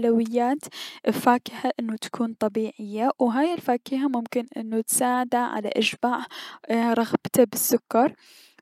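Nothing in this speech recording stands out as a technical fault; it just runs along without any glitch worth pointing to.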